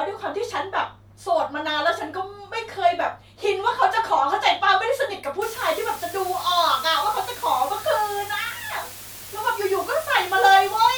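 From 5.42 s to the end, the speech is reduced to low bit depth with dither: the samples are quantised to just 6 bits, and dither noise is added before rounding. The dither turns the coarse rounding error into steady white noise rather than distortion that tracks the signal. So the speech stays clean in shape, but it now sits on a constant, even hiss only about 15 dB below its own level.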